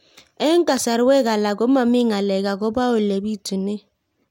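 Nothing in this recording trips any alarm: no dropouts, glitches, clicks or other faults turn up anywhere along it.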